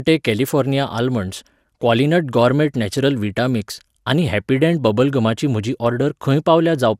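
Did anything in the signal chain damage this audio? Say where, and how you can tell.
Yes. Generation loss runs through the whole speech clip, at the codec stage. The sound is swirly and hollow, consonant attacks are smeared, and nothing is present above 16.7 kHz, which fits a 128 kbit/s MP2 chain. The damage is far worse than one pass at that rate would leave, so the likely cause is around ten successive decode and re-encode cycles. Each pass quantised on a shifted frame grid, stacking noise.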